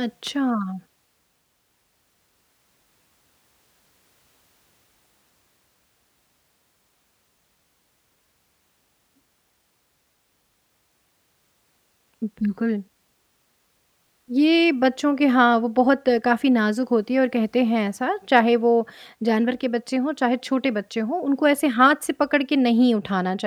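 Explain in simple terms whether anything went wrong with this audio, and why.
Nothing went wrong here; no problems can be heard.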